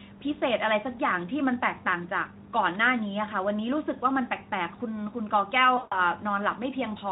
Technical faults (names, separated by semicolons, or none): VoIP packet loss concealed by the speech codec